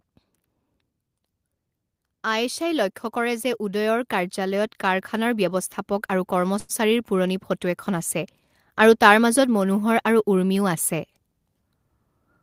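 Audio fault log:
2.23 to 8.18 s, automatic gain rising: the gain control judged the input too quiet and lifted it by about 10 dB over nearly six seconds, so speech and background noise swell together. The waveform envelope widens steadily, and the spectrogram noise floor brightens across all frequencies.
6.59 to 6.72 s, short stall from a late packet: a packet arrived late, the jitter buffer ran dry, and the receiver held the last sound for 95 ms before resuming where it left off. Nothing is lost, but one sound drags with a faint buzz or dip. The spectrogram shows a flat, repeated harmonic stripe.
11.13 to 11.70 s, jitter buffer speed-up: with more audio buffered than it aims for, the receiver trimmed short pitch-period pieces repeatedly, roughly a tenth of a second in total, playing speech at about 116% speed with unchanged pitch. It sounds hurried. Syllables look compressed in time, with harmonics at the same height.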